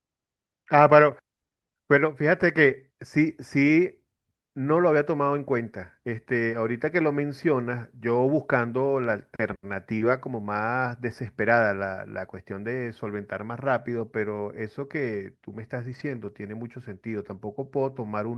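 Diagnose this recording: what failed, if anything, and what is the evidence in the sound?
The failure sits in the network stage: a lost packet rebuilt from error correction. From 15.91 to 16.01 s the sound turns briefly rougher and grainier, but it never drops out. About 60 ms of it was rebuilt, which points to three lost 20 ms packets. Each following packet carried a low-bitrate backup copy of the missing one. The Opus decoder played those copies in place of silence, so the gap is filled with coarser audio. The call path's top end stops near 12 kHz throughout.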